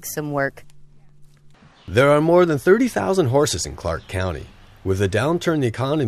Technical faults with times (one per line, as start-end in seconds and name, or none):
none